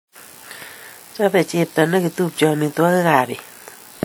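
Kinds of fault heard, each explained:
WMA compression: likely a coarse transform encoder, consistent with about 48 kbps, spreading quantisation noise across long blocks, so the speech rings and smears with breathing hiss.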